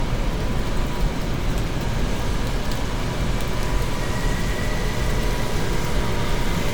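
An everyday sound recording with generation loss throughout. The texture swirls and smears, and it sounds hollower than a single encode would. Sharp attacks come out blurred. Top-end content runs up to about 20.1 kHz, so this is not simple band-limiting. The likely cause is repeated lossy coding. The artefacts fit MP3 at around 130 kbit/s, decoded and re-encoded roughly seven times. Each pass lands on a shifted frame grid, so quantisation noise and spectral holes accumulate.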